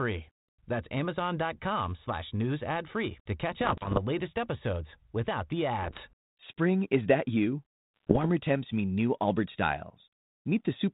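Bit errors on an ADPCM link hit three stretches: 3.6 to 3.99 s, 5.82 to 6.12 s, and 7.96 to 8.26 s. Flipped bits corrupt the coded differences. The decoder's step size and predictor then go wrong, so each error rings on for a few milliseconds. You hear pops, rough bursts and brief level jumps. The first stretch is the densest, with errors in one or two percent of bits. The narrowband base sound fits a G.726 link at 32 kbit/s.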